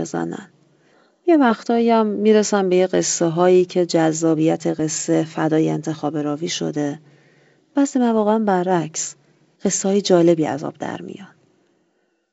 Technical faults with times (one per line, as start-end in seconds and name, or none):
none